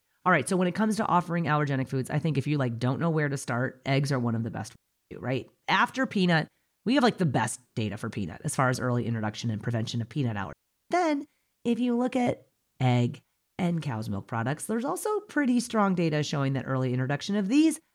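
Two digital wireless dropouts occur in this speech. At 4.75 s, after "one of the best", the audio mutes for about 0.36 s; at 10.53 s, after "and prevention of peanut", it mutes for 0.38 s before "then if you look". Each time the receiver lost too much data and muted with a very short fade, leaving a clean hole of near silence without any noise burst on either side.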